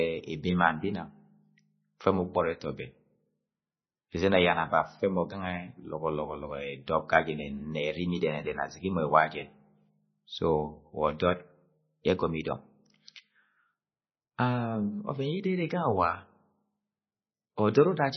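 MP3 compression runs throughout the speech: nothing survives above 6 kHz, and the sound is heavily watery and swirly, with metallic chirps on s sounds and smeared consonant attacks. This likely comes from MP3 encoding at a very low bitrate, around 16.7 kbps, where the encoder drops the treble and zeroes weak frequency lines that flicker from frame to frame.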